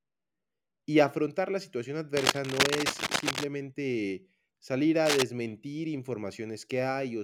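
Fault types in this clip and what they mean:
Cable scratch noise: dense, ragged bursts of scratchy, rustling noise sit right on top of the speech, roughly as loud as the talking itself. The first patch runs from about 2.17 to 3.44 s. A much shorter one hits from 5.05 to 5.22 s. The likely cause is a worn cable, connector or control being moved, so the contact resistance jumps around rapidly and sprays uneven noise into the signal.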